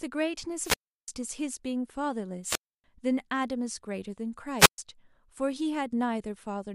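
Wireless microphone squelch dropouts occur at 0.60–1.08 s, 2.43–2.84 s and 4.58–4.78 s. Each time the FM radio link fades, static rises, and the receiver's squelch mutes the output for about 0.34 s, 0.29 s and 0.13 s before the speech resumes.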